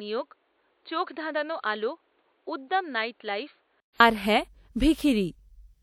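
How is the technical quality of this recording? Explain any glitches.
The recording has one clear problem: for the first four seconds the speech comes through a narrower, duller channel, then it opens up.

From 0.0 to 4.0 s the input has likely switched to a poorer device. Nothing is present above 4.5 kHz, the level sits about 10 dB lower, and a new noise floor runs about 40 dB under the speech, so the audio sounds boxy. A 200 ms silence falls at the switch, and full bandwidth returns just before "আর হ্যাঁ". On a spectrogram the area above 4.5 kHz is empty until 4.0 s. The waveform shows smaller amplitude up to that point, then a flat 200 ms gap.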